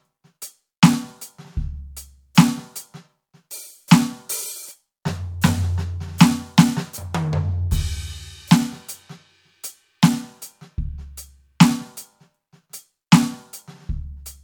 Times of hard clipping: 13.13-13.15

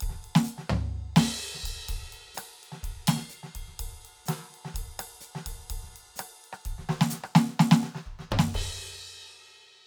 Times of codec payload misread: none

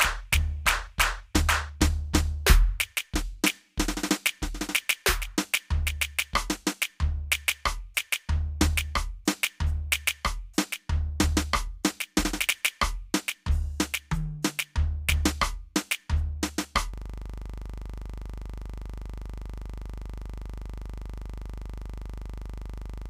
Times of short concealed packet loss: none

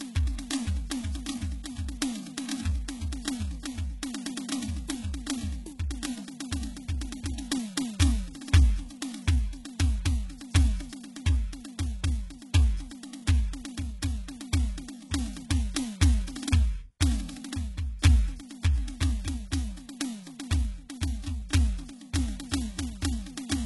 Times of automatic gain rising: none

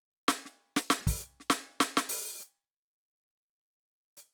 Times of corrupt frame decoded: 0.97-1.04, 2.09-2.16

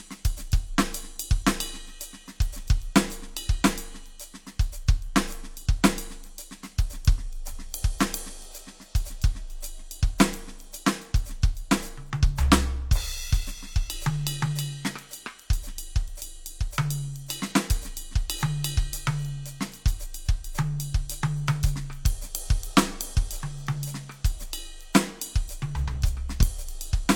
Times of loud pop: 26.41-26.44

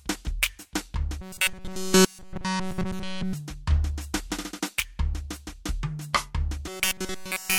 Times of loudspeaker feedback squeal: none

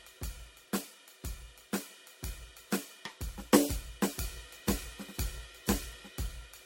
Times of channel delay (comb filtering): none

